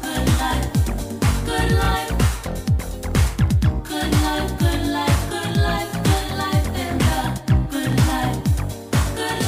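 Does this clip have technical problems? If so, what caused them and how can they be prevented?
Yes. Brief stutters at 1.85–1.88, 3.88–3.90, 5.90–5.93 and 7.93–7.95 s come from overlapping chunks: each 2 s chunk begins before the previous one ends, so 25 ms plays twice at each join. To prevent it, make each chunk start exactly where the previous one ended, or crossfade and trim the overlap when joining.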